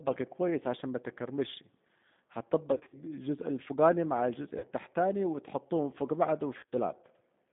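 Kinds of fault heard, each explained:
G.729 codec: The speech sits in a narrow telephone band, from about 150 Hz up to 3.6 kHz, with nothing bright on top. It has that slightly rough, synthetic edge you get when the codec rebuilds the voice from a vocal tract filter, a pitch predictor and a few pulses per frame instead of sending the actual waveform. The damage is clearly audible the whole way through, and the sound fits G.729A at 8 kbit/s.
VoIP packet loss concealed by the speech codec: There are three spots where packets went missing and the decoder papered over them by carrying its last pitch and filter forward while fading the level, so the speech goes buzzy and smeared before recovering. Around 2.74 to 2.98 s and 6.58 to 6.75 s the gaps are scattered, adding up to about 120 ms each. At 4.58 to 4.70 s it's a single 50 ms hole.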